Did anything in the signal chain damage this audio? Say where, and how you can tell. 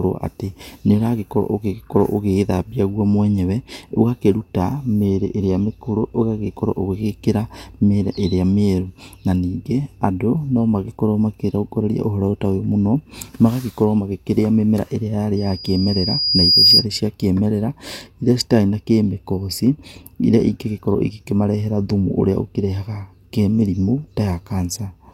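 Yes. From 15.36 s to 16.86 s the speech is overrun by loudspeaker feedback squeal, a failure at the playback stage where the loudspeaker's output reaches the microphone. A single pure tone near 4.9 kHz rises steadily over about a second and a half. It ends up roughly 10 dB louder than the speech. The acoustic loop between speaker and microphone has more than unity gain at that frequency, so each trip around it feeds the tone further.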